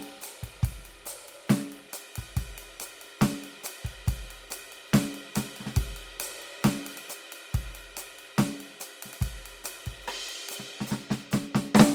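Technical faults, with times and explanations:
No technical faults can be heard in this music.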